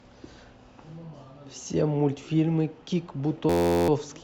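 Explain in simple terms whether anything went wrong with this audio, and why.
A system hang loop hits from 3.50 to 3.89 s. The computer briefly froze while the sound hardware kept replaying one tiny 11.6 ms slice, about 34 times over, which fits a 512-sample buffer. Repeating at 86 times a second, it sounds like a steady buzz.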